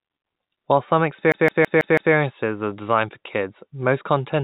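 From 1.32 to 2.14 s the speech locks into a CD stuck on one turn: a scratch keeps throwing the laser back a track, so a 0.16 s slice of audio plays five times over with a tiny mute at each jump. It sounds like a rapid, mechanical stutter. On the waveform the same short shape repeats at even intervals, broken by brief dropouts. On the spectrogram identical blocks are stacked side by side, all capped at 4 kHz by the call path's narrowband coding, which fits G.711 mu-law.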